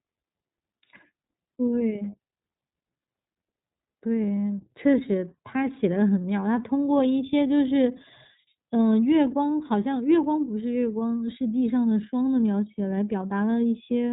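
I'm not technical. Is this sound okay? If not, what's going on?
No. Throughout, the speech has been squeezed by the iLBC codec, a phone-call format that drops everything above 3.8 kHz, leaving it muffled, slightly rough and synthetic.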